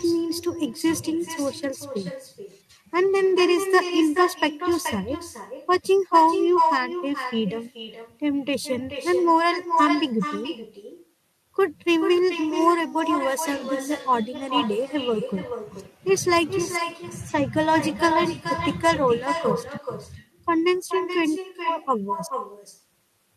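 Throughout the recording, there is echo with no canceller: the far end is playing the call on a loudspeaker, its microphone picks that up, and nothing removes it. Every phrase returns around 400 ms later as a thinner copy, only about 7 dB quieter than the speech.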